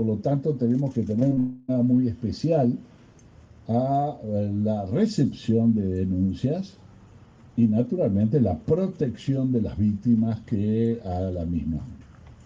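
Short concealed packet loss strikes three times in quick succession, at 1.19 to 1.23 s, 1.29 to 1.33 s and 1.35 to 1.39 s. Each is a gap of about 20 ms that the receiver patched by extending the preceding sound. Unlike a dropout, these come across as brief smears or wobbles, with the real audio resuming almost immediately.

From 1.39 to 1.71 s a much longer stretch of about 300 ms is filled by a continuation of the last sound that decays into a fading buzz or hiss and never reaches full silence, likely a long network dropout. Its length and audible fade, rather than a momentary blip, set it apart from the short losses.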